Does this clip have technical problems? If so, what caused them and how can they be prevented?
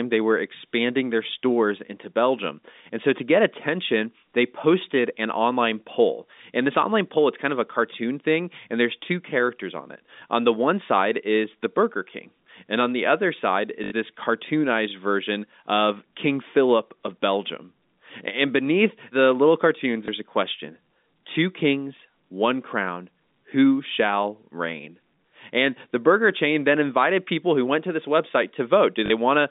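Yes. Packet loss with last packet repeated occurs at 13.84–13.92 s, 20.06–20.08 s and 29.06–29.10 s (80, 20 and 40 ms), which fits dropped 20 ms packets. Replaying the last packet appears as identical copied waveform blocks. Better network quality of service and proper packet loss concealment would prevent this.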